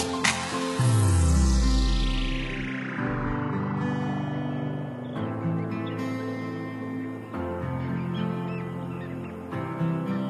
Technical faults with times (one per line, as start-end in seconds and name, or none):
0.00-4.00 adaptive stream starting at a low bitrate